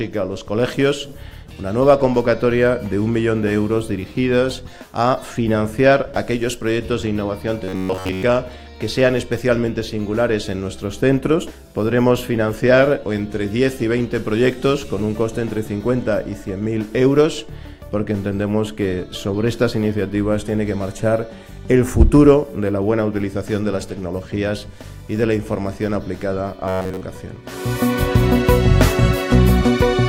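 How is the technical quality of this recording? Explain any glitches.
The recording has two glitches of the same kind. Between 7.64 and 8.23 s, and again between 26.68 and 27.03 s, there's robotic sound from repeated short buffers. The likely cause is audio arriving too slowly, so the playback repeated a buffer of roughly 10.7 ms instead of the missing material, which replaced most of the real signal in those spans. That looping imposes a steady 93.8 Hz buzz, turning the sound rigid and metallic while it loosely follows its original contour.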